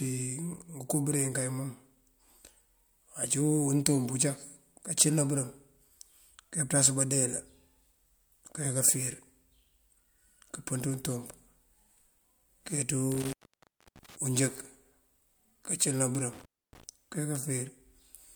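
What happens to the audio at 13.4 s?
At 13.4 s you're in the middle of an intermittent contact fault running from about 13.12 to 14.16 s. A loose plug or cable briefly breaks the connection, so the speech drops out for about 0.67 s, with crackle at each edge and faint hiss left while the line is open.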